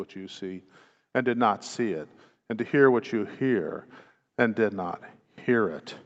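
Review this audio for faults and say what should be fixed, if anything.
Nothing here needs fixing: the speech has simply passed through a call's microphone processing, which trims away the deepest bass and leaves nothing above about 8 kHz, and that's just how such a path sounds.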